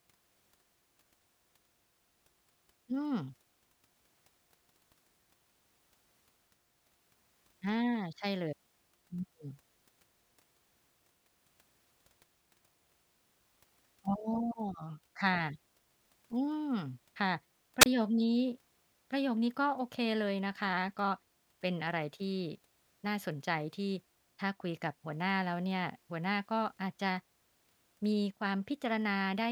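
At 17.80 to 17.86 s a wireless microphone squelch dropout occurs: the radio signal fades, hiss rises briefly, the receiver mutes for about 28 ms, then speech returns.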